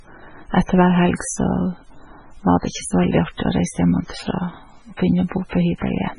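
Heavy MP3 compression is likely at work across the whole speech clip. An encoder starved of bits, with damage that fits a very low bitrate around 16 kbps, has discarded everything above 10.5 kHz and zeroed weak frequency lines that flicker on and off between frames. The result is dulled treble, a watery, swirling texture throughout, metallic chirps on s sounds, and smeared consonant attacks.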